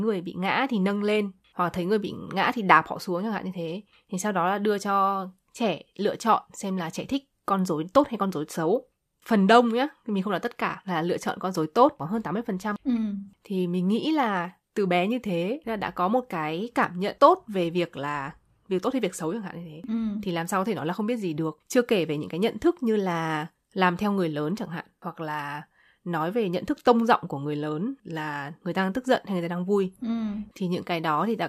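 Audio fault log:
No technical fault is audible anywhere in the speech, and the signal stays continuous over its whole course.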